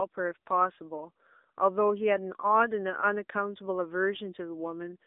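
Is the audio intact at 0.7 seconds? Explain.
No, at 0.7 s the speech is running through an AMR narrowband mobile codec, a fault that lasts the whole clip rather than a brief event at that moment. The AMR-NB encoder, which fits a rate near 7.4 kbps, models the voice as a vocal-tract filter excited by a few pulses in each 5 ms, so the speech sounds buzzy and synthetic, with plainly audible damage. Nothing above about 3.8 kHz survives. The band sits between 250 Hz and 3.7 kHz. That modelled buzz is what sets it apart from a simple low-pass filter or a plain telephone band limit.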